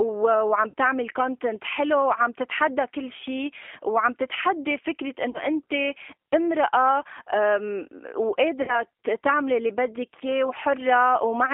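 Throughout the speech, the G.729 codec is plainly audible. The band is confined to a telephone line's roughly 300 Hz to 3.4 kHz, and the voice has the slightly rough, synthetic grain of a model-based coder that rebuilds each frame from a vocal tract filter, a pitch predictor and a few pulses, which points to an 8 kbit/s G.729A stream. Unlike the plain muffling of simple bandwidth limiting, the damage lies in the speech's texture: a rough, synthetic quality.

VoIP packet loss concealed by the speech codec then occurs three times. From 0.70 to 0.74 s and from 5.30 to 5.43 s, about 40 ms of audio is missing each time, which fits two lost packets. From 8.62 to 8.79 s, about 60 ms is missing, which fits three. Rather than falling silent or clicking as a hard dropout would, the decoder stretches its last pitch and filter into a buzzy tone or coloured noise that fades. Because each frame builds on the one before, the voice remains weak or distorted after the audio returns, which is why the later two events last well beyond the missing stretch.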